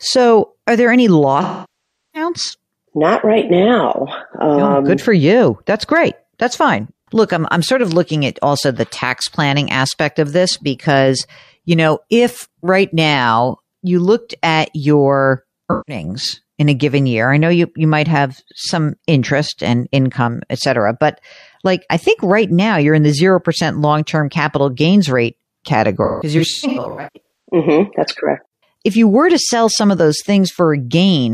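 A long dropout that decays to a very faint noise floor and fades back in interrupts the speech at 1.42–2.30 s after "are there any", and smeared, noisy or phasey patches follow at 11.40–11.53 s between "aspect of this because" and "you know if right", at 15.71–16.03 s between "you looked at your" and "in a given year", and scattered across 26.04–27.55 s with runs up to about 150 ms. This is AAC frame loss with concealment: the decoder patched roughly 725 ms, 85 ms, 171 ms and 853 ms of missing audio from the last good spectrum.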